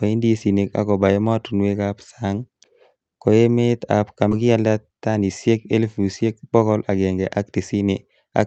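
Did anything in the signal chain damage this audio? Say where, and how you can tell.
Yes. At 4.31 s the speech abruptly jumps forward, with no silence or fill, as if about a second and a half of talk had vanished. This is a skip ahead in the network and jitter-buffer stage: a stretch of audio was dropped and the audio on either side was butted together almost seamlessly.

From 4.41 to 5.30 s, and again from 6.26 to 7.75 s, the talker sounds hurried, running about 11% and then 7% faster, yet the pitch stays put. That is jitter buffer speed-up: the receiver trimmed short pitch-period slices, roughly a tenth of a second each time, to shrink excess buffered delay.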